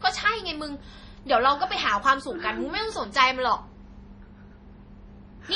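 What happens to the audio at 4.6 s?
At 4.6 s you're hearing the same damage that runs through the whole clip, and it's likely MP3 compression. There's nothing above 10.5 kHz, and the speech has that watery, swirly quality you get when the encoder drops weak frequency lines that then flicker in and out between frames. S sounds pick up a metallic chirp and onsets smear. The heavy damage fits a starved bitrate around 32 kbps.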